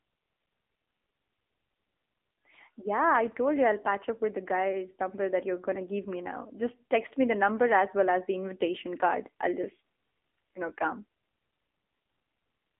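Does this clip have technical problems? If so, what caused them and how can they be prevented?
Yes. Throughout, the speech sounds thin, muffled and buzzy, with a synthetic edge from AMR narrowband mobile codec compression. The band runs from about 250 Hz to 3.5 kHz, with nothing above 3.6 kHz, and the buzziness fits a low AMR-NB mode near 8 kbit/s. To prevent this, record or route the audio over a wideband path (such as AMR-WB or a direct digital connection) rather than a narrowband mobile call.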